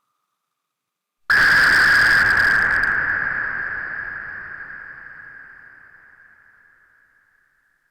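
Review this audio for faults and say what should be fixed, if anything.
A stage in the chain was driven about 11 dB past its limit from 1.30 to 3.10 s. The resulting hard clipping flattens peaks into harsh, high-harmonic fuzz. Lower the gain ahead of that stage so peaks stay below full scale.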